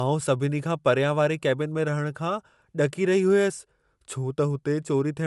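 From start to finish the speech carries a grainy, plainly breathy edge, with nothing above 11.5 kHz. That's likely Bluetooth LC3 compression: the codec strips and noise-fills the upper spectrum, which fits a modest rate around 48 kbps with 10 ms frames.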